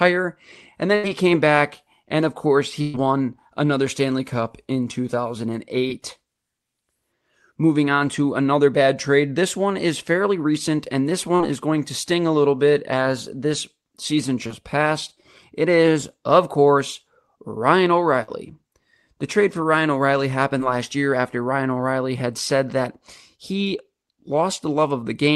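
A burst of packet loss hits at 0.95–1.05 s, just before "came back and of", at 2.81–2.96 s, right after "back and of course", and at 18.23–18.30 s. Each time the receiver stretches and fades the last sound, then the speech jumps ahead with about 80, 120 and 40 ms missing. Short concealed packet loss appears at 5.88–5.92 s, 11.36–11.41 s and 20.58–20.61 s, just before "last year after". There, 20 to 40 ms gaps are patched from the preceding sound, leaving a brief smear or wobble. Across the whole clip, the call path's codec limits the top end to around 12 kHz.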